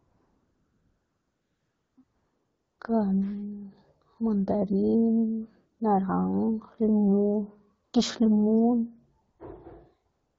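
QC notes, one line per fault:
0.00–1.97, 2.03–2.79, 5.77–5.79, 7.85–7.93 (just before "gix limun"), 9.21–9.39 (just after "gix limun"), 10.11–10.39 s: AMR comfort noise. Speech frames stopped as the pauses were treated as silence, so steady synthetic noise replaces the real background and switches in and out.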